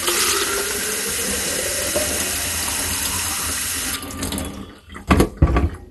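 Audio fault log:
Throughout: MP2 compression, likely. Nothing is present above 12.1 kHz, so the sound is dull. The remaining bands are coarsely quantised and give a gurgling, granular grain. This points to Layer II sub-band coding at a low rate, around 64 kbps, with upper bands switched off.
2.74 s to 5.72 s: periodic USB or driver dropouts. There is a tick about once per second, roughly four in all. Each time, about a millisecond of audio is skipped outright rather than filled, and the abrupt splice in the waveform produces the click.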